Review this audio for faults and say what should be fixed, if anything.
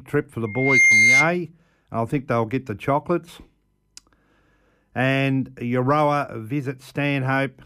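A piercing single tone at 2.1 kHz swells within roughly a third of a second to sit well above the speech, from 0.45 s to 1.34 s. This is loudspeaker feedback squeal: the microphone hears its own loudspeaker, and at that frequency the loop gain exceeds one. To prevent it, lower the gain, move the microphone away from the loudspeaker, or notch 2.1 kHz.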